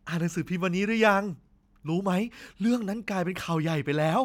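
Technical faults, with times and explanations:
No technical faults are audible.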